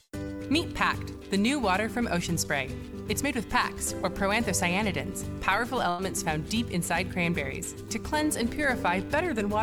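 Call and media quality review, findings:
Held buzz or fading hiss at 5.89–6.01 s, then sound resumes further on with about 100 ms skipped. Burst of packet loss in network/jitter buffer path: consecutive packets lost or late, receiver concealment stretched the last sound for about 92 ms while attenuating.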